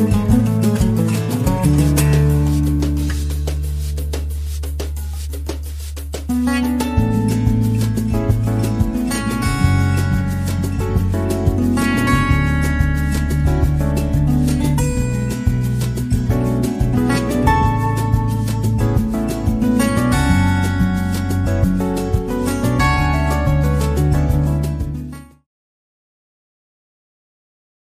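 Nothing technically wrong turns up in this one; the audio just runs along and eases out gently at the end around 24 to 25.5 s, the way an editor would finish it.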